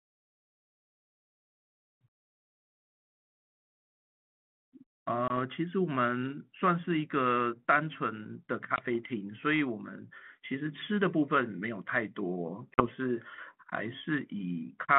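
At 5.28 s, 8.76 s and 12.74 s the speech falls into a hard-edged hole: packet loss on an ADPCM call, losing 20 ms at the first two and 40 ms at the third, about one packet and then two. The decoder's predictor and step size lose track of the sender's, so the speech returns with brief slight distortion, settling by 5.39, 8.95 and 12.86 s. A waveform shows a flat gap, then the speech resuming. A spectrogram shows a blank vertical stripe across the 150 Hz to 3.4 kHz line band, which fits 32 kbit/s ADPCM.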